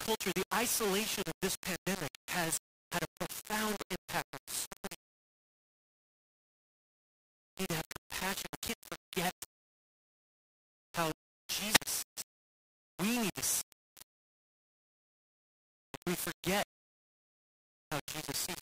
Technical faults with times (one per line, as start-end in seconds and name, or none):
0.00-18.61 low bit depth without dither